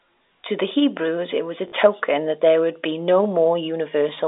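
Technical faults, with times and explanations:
1.68–1.72 s, packet loss with last packet repeated: between "it was a" and "that there would be", 40 ms was filled by replaying the previous packet, fitting two 20 ms packets. The repeat buzzes near 50 Hz, showing as a duplicated waveform block.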